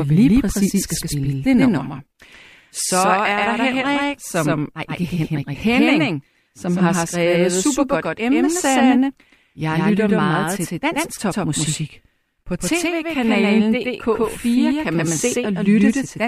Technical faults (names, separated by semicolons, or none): doubled audio track